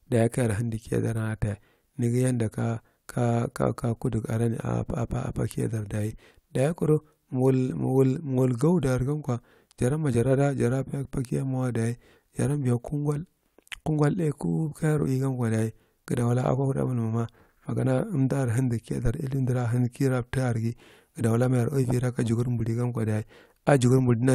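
At about 19.06 s there's a phantom power thump, a short low bump that's gone by 19.12 s. Someone switched the supply on or off with the input still live, and that sudden voltage step got pushed through the coupling capacitors into the signal. It peaks at about -16 dBFS and dies away over roughly 13 ms, so you hear a quick deep knock rather than a long boom.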